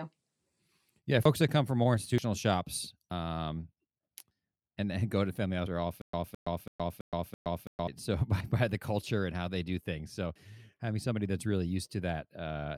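In this speech clip, the capture side was likely not collecting samples before the hardware overwrote them. These dropped buffers (overruns) join the audio directly across each lost piece, so there is a skip ahead of roughly 50 to 100 ms at 1.25 s (just before "that come from more"), 2.18 s, 3.11 s, 5.67 s, 8.41 s (before "by the culture and") and 10.36 s (before "having somebody"). Playback likely stalled from 6.02 to 7.88 s. The result is a stutter with silent gaps: a 0.21 s fragment repeats five times, each followed by about 0.12 s of digital silence, every 0.33 s, and the audio that belonged there is lost.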